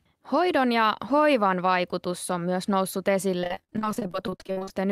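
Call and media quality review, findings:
Repeated packet loss (robotic sound), 3.40–4.71 s: speech turns choppy. Likely component: jitter buffer/network path. Dozens of short holes, longest 53 ms, each patched by extending the previous audio; nearly half the stretch concealed.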